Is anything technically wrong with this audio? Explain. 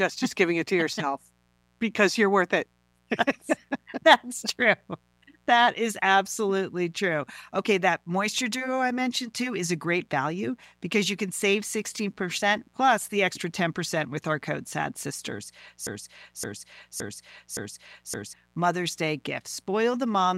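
Yes, there are two faults.

Mains buzz runs through the whole recording. Sharp switching spikes, twice per cycle of a 60 Hz supply, have leaked into the signal, stacking harmonics of 60 Hz up into the kilohertz range. It sits far below the speech, roughly 40 dB down, as a steady raspy buzz most obvious in pauses. A spectrogram shows evenly spaced horizontal lines at 60 Hz multiples, unbroken from start to end.

A broken-record loop occupies 15.87 to 18.33 s. A 0.57 s fragment plays four times back to back, identically, and the speech that belonged in that span is missing. The likely cause is a player, encoder or stream stall that kept resending its last buffered piece. On a waveform the same envelope shape repeats at exact 0.57 s intervals, and a spectrogram shows one block of pattern copied side by side.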